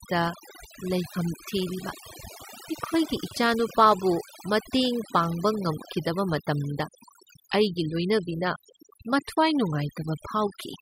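Throughout the speech, overdone noise removal gates quiet frequency bands away, leaving speech over near-silence with twinkling specks, seen as scattered isolated dots on a spectrogram.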